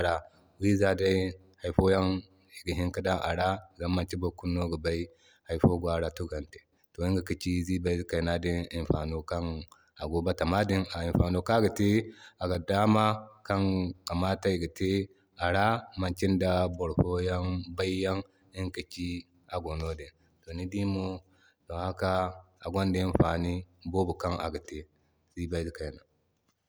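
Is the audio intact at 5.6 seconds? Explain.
Yes, the audio is intact at 5.6 seconds, with no audible fault at that point.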